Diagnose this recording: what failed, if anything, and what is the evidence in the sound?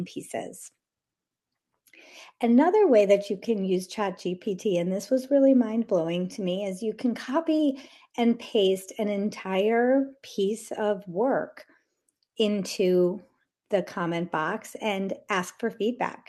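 Nothing failed; no faults found.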